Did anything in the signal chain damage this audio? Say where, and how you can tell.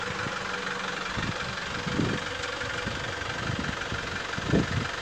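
No, nothing in the chain audibly damaged it.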